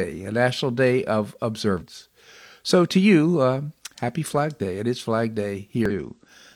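A short glitch breaks in at 1.77 to 1.83 s, just after "a national day of", and another at 5.86 to 5.91 s. Both come from damaged data in a compressed stream: corrupted bytes make the decoder misread frames and lose sync until it finds the next frame header.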